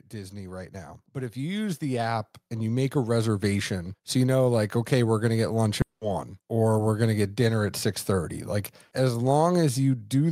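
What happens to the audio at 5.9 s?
A long network dropout runs from 5.81 to 6.03 s, just after "going to get lunch". The likely cause is audio that stopped arriving: about 200 ms is filled with a fading buzz continuing the last sound, then about 50 ms of silence, before "or we're going to" resumes with roughly 200 ms missing.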